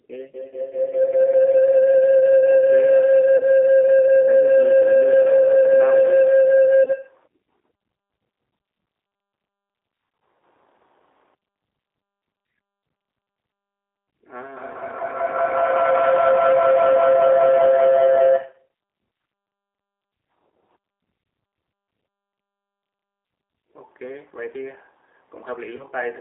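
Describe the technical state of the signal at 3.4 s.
From 3.37 to 3.43 s, VoIP packet loss concealed by the speech codec removes about 30 ms of audio, which fits one lost packet. The decoder fills the hole by repeating its last pitch and filter state with falling gain, so the speech smears into a brief buzzy tone or coloured noise that fades, and sounds weak for a moment after the stream resumes.

Underneath, the whole signal carries G.729 codec damage, consistent with an 8 kbit/s G.729A stream. Speech is rebuilt from a filter, pitch predictor and sparse pulses inside a 300 Hz to 3.6 kHz band, giving a clearly rough, synthetic edge.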